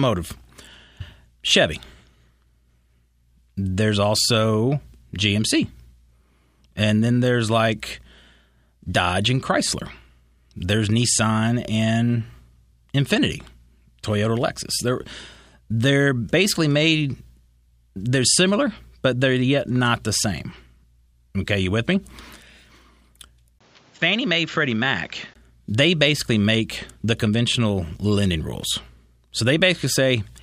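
An input switch to a poorer device runs from 23.6 to 25.4 s, just before "they basically make the". The recording likely moved to a narrower-band microphone: after a 20 ms gap, the speech loses everything above 7.6 kHz, drops about 5 dB, and gains a noise floor around 30 dB down.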